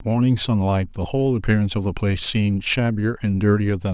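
Listening through the recording, nothing stood out as a technical problem at any point.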